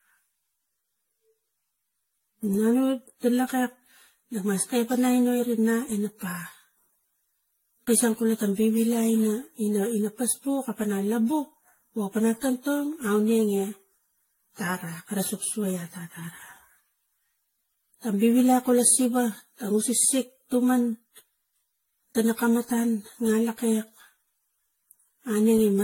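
Throughout the speech, consonant onsets blur and the sound turns swirly and hollow, with nothing above 16.6 kHz. The likely cause is generation loss from around ten lossy re-encodes, consistent with AAC-LC near 64 kbit/s. A spectrogram shows a hard ceiling and accumulated holes beneath it.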